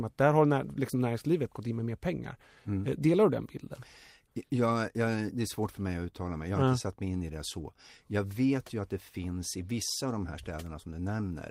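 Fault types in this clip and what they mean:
Lost packet rebuilt from error correction: at 7.61 s about 20 ms sounds rougher and noisier but never drops out, which fits one lost packet patched from its neighbour's low-bitrate backup copy.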